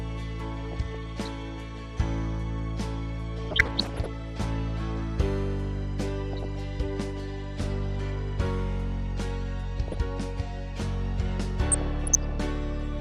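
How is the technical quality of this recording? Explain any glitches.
The recording has two problems: constant codec damage and five bursts of reception errors.

Throughout, the sound is dull and carries a granular, gurgling texture. The likely cause is MP2 compression at a low bitrate, around 80 kbps judging by the damage. Too few bits force upper sub-bands off and leave the remaining bands coarsely quantised.

DAB burbling occurs at 0.64–1.28 s, 3.37–4.06 s, 6.33–6.56 s, 9.88–9.98 s and 11.72–12.43 s. At these points bit errors, roughly 0.3 to 1 percent and worst in the second burst, slipped past error correction into the audio data. Corrupted samples put short blips of noise into individual sub-bands, and corrupted scale factors make sub-bands jump in level, so the sound briefly burbles.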